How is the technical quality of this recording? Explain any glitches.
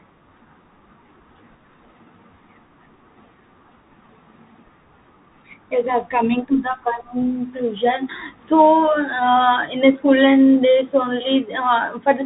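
The quality is poor throughout, limited by a Bluetooth CVSD headset codec. From start to finish, nothing passes above 3.8 kHz, so the speech sounds narrow and muffled, which fits a 64 kbps CVSD link. Each sample is coded as one up-or-down bit with an adapting step, which leaves plainly audible damage: scratchy s sounds, distorted loud high sounds, and a granular hiss underneath.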